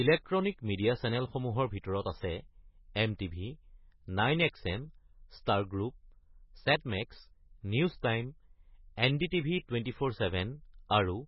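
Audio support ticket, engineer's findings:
MP3 compression, throughout. Nothing above 5.6 kHz; s sounds dulled. Watery, swirly texture as weak frequency lines switch on and off frame to frame; smeared onsets. Heavy damage, likely a bit-starved MP3 encode, fitting roughly 16 kbps.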